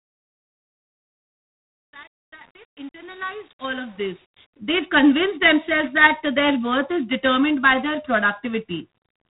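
Speech, and the whole thing has gone through G.726 ADPCM at 24 kbit/s, so there's nothing above about 3.9 kHz and a plainly audible rasping hiss sits under the speech, rising and falling with its level. That comes from coding each sample as a few bits of difference from a running prediction. At this rate there are too few bits to track the waveform closely, so the prediction error ends up as noise. On top of that there's truncation distortion on a fade. The fade-in runs from the start to about 4.53 s, and from 0 to about 4.36 s the quiet part comes out gritty. The level stage is keeping too few bits, which fits an 8-bit path, and it isn't adding dither, so the low-level waveform collapses into a handful of coarse square steps.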